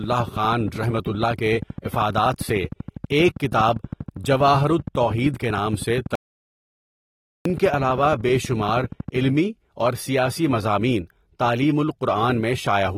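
Speech with AAC compression damage that is plainly audible throughout: the voice sounds dull and smeared with a fizzy warble on sibilants, likely from AAC-LC encoding at a low rate, which fits roughly 32 kbps. A spectrogram shows nothing above 16.6 kHz. A train of clicks runs from 0.04 s to 9.25 s, about a hundred evenly spaced ticks at 12.6 per second, peaking around 5 dB above the speech. They appear as thin vertical lines on a spectrogram and sharp spikes on the waveform, likely from electrical interference or a faulty connection. An audio dropout to silence lasts 1.3 s, from 6.15 s to 7.45 s. The waveform drops to silence and the spectrogram shows a blank gap with no room tone, likely from momentary loss of the input signal.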